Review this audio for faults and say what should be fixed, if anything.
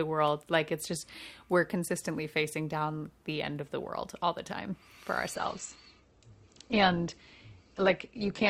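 Adaptive stream at a lower bitrate from 5.35 s to the end at 8.49 s: the speech abruptly loses everything above 8.2 kHz and turns smeared with no gap, which fits a drop from roughly 64 to 12 kbit/s Opus. Prevent it by buffering more and holding the higher rendition longer before switching down.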